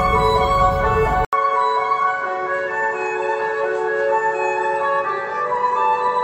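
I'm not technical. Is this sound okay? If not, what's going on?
No. At 1.25 s there's a brief gap, then it turns duller, quieter and a bit hissier; most likely the input switched to a poorer device, one capping out around 8.1 kHz.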